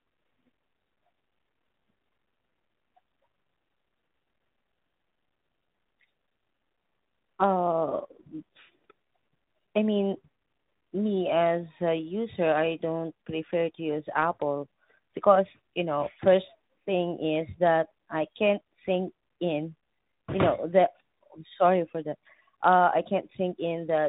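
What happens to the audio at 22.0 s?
At 22.0 s it's the tandem speech coding that runs throughout. Each codec recodes the last one's damage, so it sounds rough, muffled and warbly, with nothing above 3.8 kHz.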